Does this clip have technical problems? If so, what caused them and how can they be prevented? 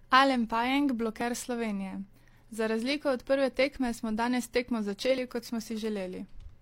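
Yes. Overlap between stream segments occurs at 1.21 to 1.25 s, 3.20 to 3.23 s and 5.18 to 5.20 s. Consecutive 2-second segments carry overlapping time stamps, so the player discards 26 to 36 ms of speech that was never actually duplicated. The waveform jumps, producing a small skip every two seconds. To prevent it, the segmenter should stamp each segment so it begins exactly where the previous one ends, with no overlap.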